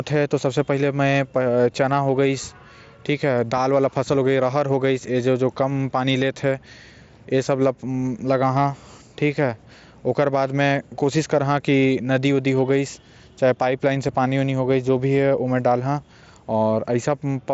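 Speech over a Bluetooth mSBC headset link, band-limited at 8 kHz with the light grain on louder passages that this codec normally leaves; no technical fault to report.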